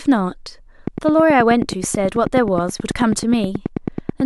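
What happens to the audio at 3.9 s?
At 3.9 s the audio is inside a train of clicks running from 0.87 to 4.21 s, regular ticks at about 9.3 per second, likely from interference or a faulty connection or power supply. On a waveform they show as evenly spaced spikes about 10 dB above the speech; on a spectrogram, thin vertical lines.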